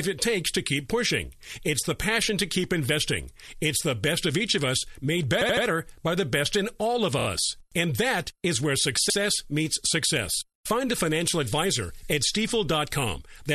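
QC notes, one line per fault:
5.41–5.65 s, repeated frames: a 78 ms block of compressed audio was decoded three extra times after "each of us made", causing a stutter that adds 235 ms before "by the best in".
7.19–7.27 s, repeated frames: a 26 ms block was played three extra times after "best in all of", giving a rapid stutter and 78 ms of added length.
9.09–9.17 s, repeated frames: a 78 ms block was sent through the decoder twice after "that is where", so a brief stutter and 78 ms extra precede "meets success".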